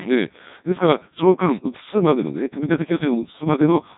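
Codec 2 vocoder damage runs through the entire clip. The speech was rebuilt from pitch, voicing, energy and a coarse spectral envelope rather than its waveform, which fits a rate near 1.2 kbit/s. It sounds heavily robotic and buzzy, with nothing above 3.8 kHz.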